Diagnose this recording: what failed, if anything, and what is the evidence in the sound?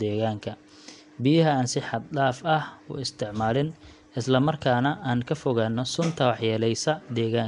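The codec stage failed, for the whole recording. The speech has a rough, hissy halo and a smeared, underwater quality. Nothing sounds above 10.6 kHz. The likely cause is Nellymoser compression. Bands starved of bits are filled with noise, which fits a stream near 44 kbps.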